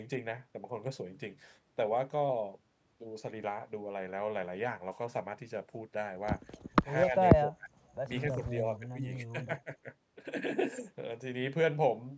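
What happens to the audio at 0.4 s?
Nothing goes wrong at 0.4 s: the speech passes through the call's microphone processing intact, with only the usual trimming of the lowest bass and content reaching up to about 8 kHz.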